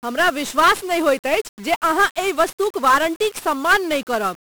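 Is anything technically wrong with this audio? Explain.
Yes. Throughout the speech, the audio carries heavy 1-bit DFPWM compression damage. Each sample is reduced to a single up-or-down decision that nudges an adaptive level toward the waveform, so the signal is only ever approximated by a stepping slope. The coarse tracking leaves dense broadband quantisation noise: the whole clip sounds fuzzy and crackly, and the upper frequencies disappear under a steady hiss. The density of the error fits a stream of roughly 48 kbps.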